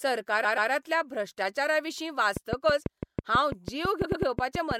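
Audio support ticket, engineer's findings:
Repeated frames at 0.43–0.70 s and 4.04–4.25 s. Stutter: a 130.6 ms block, then a 104.5 ms block, each replayed twice. Compressed frames were duplicated in storage or transport. The speech is 261 ms and 209 ms longer.

Train of clicks at 2.37–4.72 s. Regular ticking, about six per second and around fifteen in all, heard through pauses too. Peaks stand roughly 15 dB above the speech. The likely cause is interference from nearby equipment or a faulty connection or power supply.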